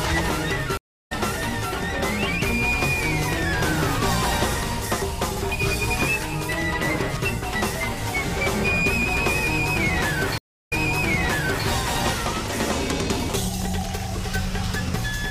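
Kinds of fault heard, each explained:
Stream reconnect: the connection drops, playback goes quiet while a new decoder starts mid-stream. At 0.77 s about a third of a second goes silent and the sound picks up roughly a fifth of a second later. At 10.38 s, a similar gap replays 0.94 s.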